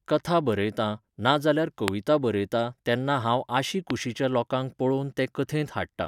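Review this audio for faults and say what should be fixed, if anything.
Two loud pops sit on the speech. The first is at 1.88 to 1.90 s, after "कथा बरयतां ना जाल्यार", about 20 dB above it. The second is at 3.90 to 3.92 s, after "बरयतां तेन्ना हांव आशी", about 15 dB above. Each is one sharp pulse, with speech continuing underneath. A sudden voltage step, likely static or a switch glitch, was added to the signal. To prevent this, secure and ground the cables and avoid switching gear while recording.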